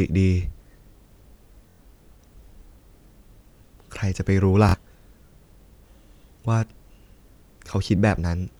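A speech clip with two brief machine-gun buzzes, at 1.70 to 1.79 s and again at 4.69 to 4.74 s, where a tiny slice of sound repeats rapidly before the speech jumps ahead. This is Bluetooth stutter: packets arrived late or not at all, so the receiver kept replaying its last short buffer to fill the gap. The first dropout covers about 93 ms, which fits four lost packets; the second about 46 ms, consistent with two.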